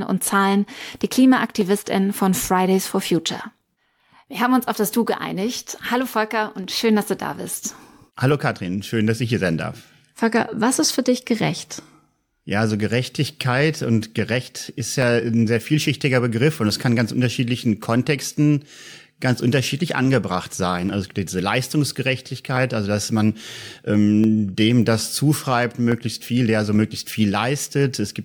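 From 0.78 s to 27.60 s, a click recurs every 0.839 s, about thirty times. These are clock drift buffer slips. Two clocks likely disagree by around 400 ppm. The buffer drifts until roughly fifteen samples are dropped or repeated.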